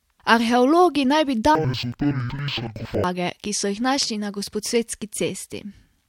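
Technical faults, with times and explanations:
1.55–3.05 s: interleaved audio read as planar. Speech drops an octave, doubled and choppy, each 93 ms block's halves playing together at half speed, fluttering near 10.8 Hz.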